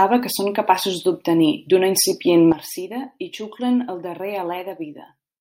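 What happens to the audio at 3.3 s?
At 3.3 s the speech is sitting noticeably quieter than it was a moment earlier, and the background noise has dropped right along with it. Both fell together at 2.52 s, just after "capaços d'obtenir d'una incipient", by about 12 dB, and they stay at that lower level to the end. This is a sudden gain jump: the likely cause is a digital gain setting changed from one sample to the next with no ramp to smooth the step.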